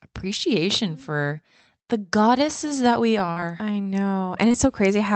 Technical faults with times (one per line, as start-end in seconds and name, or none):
3.09-4.56 repeated packet loss (robotic sound)